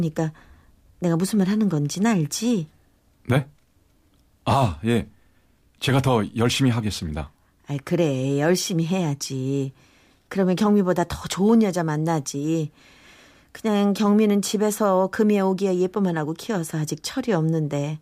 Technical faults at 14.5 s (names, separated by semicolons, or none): none